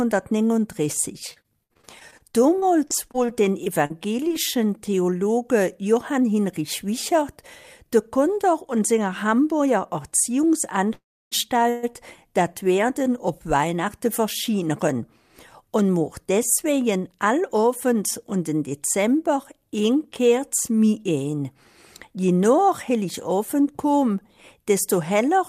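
From 1.33 to 4.32 s there is repeated packet loss, giving a robotic sound. The audio breaks up into 22 short holes, the longest 56 ms. Each hole is bridged by stretching the previous fragment, so about 14% of the stretch is synthetic filler and roughly 360 ms of real material is gone. Unlike a freeze, the sound never stalls. It keeps moving but turns choppy, with pieces missing.

At 10.93 to 11.33 s, and again at 11.69 to 11.85 s, the audio freezes. The likely cause is packets held up in transit, leaving the jitter buffer empty. In the first freeze the last sound carries on as a fading buzz and then falls silent for 310 ms, adding 383 ms of delay. The second is a brief 134 ms buzz with no silence. In both, the audio picks up exactly where it stopped, so nothing is lost, which distinguishes these freezes from the packet-loss stretch.

From 16.3 to 17.64 s the jitter buffer speed-up plays the sound at about 106% of normal speed, trimming roughly a tenth of a second. 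From 22.53 to 23.62 s it runs at 105% and drops about a twentieth of a second. The receiver is removing tiny pitch-period slices to shed excess buffered delay. Pitch stays unchanged and there are no gaps or buzz, only a brief hurried feel, which separates this from either concealment fault.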